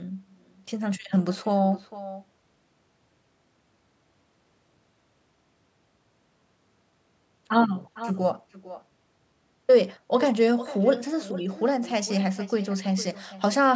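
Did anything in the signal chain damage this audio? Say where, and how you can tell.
Yes. The damage is at the call stage, an echo with no canceller. Throughout the speech, a quieter, thinner copy trails each phrase by about half a second, at about 16 dB down. The far end's loudspeaker fed its microphone, and nothing subtracted that return.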